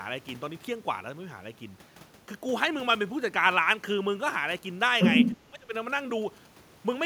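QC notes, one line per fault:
4.34–6.47 s, GSM signalling bursts: A nearby 2G phone's short radio bursts are rectified by the audio circuitry, giving a galloping dit-dit-dit of short buzzes at a 217 Hz repetition rate, well below the speech. On a spectrogram this shows as evenly spaced harmonic lines at 217 Hz multiples, arriving in clumps. The waveform shows small repeating spikes.
4.99–5.37 s, other side's voice leaking through: A second voice comes through slightly louder than the talker, likely because the echo canceller left loudspeaker playback in the microphone signal. On a spectrogram a second, unrelated set of harmonics overlaps the talker's formants. The waveform envelope rises.
5.40–5.73 s, speech suppressed in double talk: The talker's level drops sharply for about a third of a second, likely because the echo canceller turned everything down when both sides spoke at once. The waveform envelope collapses.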